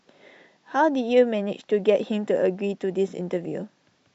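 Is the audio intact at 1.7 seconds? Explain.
Yes, the speech at 1.7 seconds is intact, with no audible fault at that moment.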